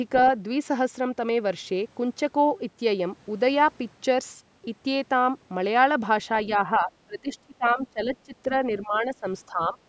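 At 6.51 to 6.56 s a brief, faint scrap of a second voice, well below the main speech, slips through: the other side's voice leaking through, likely echo the canceller missed.

From 6.66 to 8.51 s the speech dips deeply and breaks up for about a second in all. Shallower dips follow at 8.81 to 9.25 s and 9.48 to 9.79 s. This is speech suppressed in double talk, likely the canceller turning down both sides during overlap.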